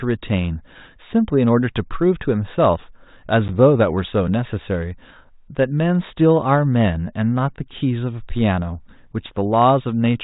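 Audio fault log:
3.48 to 3.50 s, packet loss on an ADPCM call: a hard-edged silent gap of 10 ms, about one packet. The G.726 decoder's adaptive predictor and step size then drift from the sender's, so the speech returns slightly distorted and settles within some tens of milliseconds, unlike a clean dropout.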